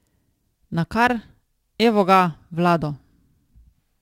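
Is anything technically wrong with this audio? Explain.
Yes, there is crude rate conversion throughout the speech. Samples were simply dropped without filtering, which fits a 48 kHz to 44.1 kHz change. The result is a gritty, inharmonic fizz roughly 30 dB down that tracks loud and bright syllables. On a spectrogram it shows as faint, unrelated tonal lines and haze.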